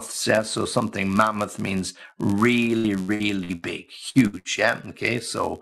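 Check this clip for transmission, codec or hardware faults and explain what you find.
Three faults stand out: a steady buzz through the whole clip, a robotic patch in the middle, and three quick dropouts near the end.

Throughout, there's a block size mismatch (padded). One stage hands over slightly shorter blocks than the next reads, and the shortfall is zero-filled. Those tiny gaps repeat at 91.5 Hz, giving a constant buzz, and the speech runs about 0.4% slow.

From 2.77 to 3.64 s you get repeated packet loss (robotic sound). Five gaps, the longest 67 ms, dropped about 300 ms in total. Each was patched by stretching the previous sound, so roughly a third of that stretch is concealment, heard as choppy, robotic speech with pieces missing.

Then there are three bursts of packet loss: 4.09 to 4.18 s, 4.27 to 4.36 s, and 4.39 to 4.48 s, each losing about 60 ms. The receiver held the last sound and faded it, giving brief held buzzes or hisses before the speech jumps ahead.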